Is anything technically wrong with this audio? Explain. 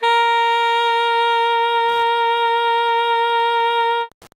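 Yes. From 1.75 s to the end at 4.35 s there is Wi-Fi interference: a nearby radio's 102.4 ms beacon is rectified by the audio circuit, producing steady ticking about ten times a second, roughly 35 dB below the signal.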